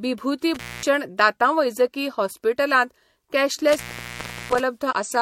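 A speech recording with two kinds of fault. Intermittent contact cuts the sound twice: from 0.55 to 0.86 s, with the line open for about 230 ms just before "दांतांवैजकी हॉस्पिटलांत", and from 3.69 to 4.60 s, open for about 710 ms. A loose plug or cable momentarily breaks the signal path. Unlike a digital dropout, which falls to clean silence, each gap has crackle at its edges as the contact opens and closes, and faint hiss while the line is open. At 4.88 to 4.93 s, a stretch of about 47 ms, damaged data in a compressed stream produces a short disturbance. Here bytes in the encoded stream are corrupted, so the decoder misreads those frames and loses sync until it finds the next valid frame header. This differs from the contact faults because there is no hiss-filled break framed by crackle. Instead there is a brief disturbance where the decoder misreads the frames.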